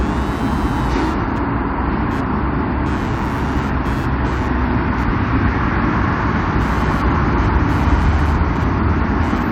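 Computer activity noise runs throughout: a buzzy chirp pulsing around 150 times per second, roughly 20 dB below the sound, shown as comb-like vertical striations across the spectrogram.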